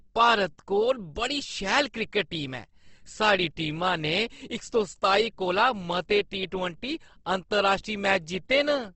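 Speech runs throughout with plainly audible codec damage. Nothing sounds above 8.2 kHz, so the top end is dull. Voiced sounds turn grainy, rough and noisy rather than swirly. The cause is likely Opus compression in its music mode, at a low rate near 16 kbps.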